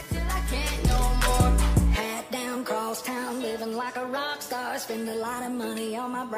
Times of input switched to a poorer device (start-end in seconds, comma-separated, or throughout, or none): none